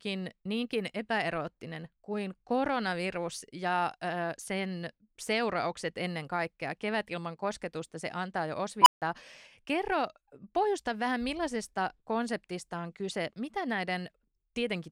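An unstable filter at 8.82 to 9.02 s: runaway recursion swells a tone of roughly 1 kHz over 43 ms into clipping, then overflow silences the speech for 157 ms.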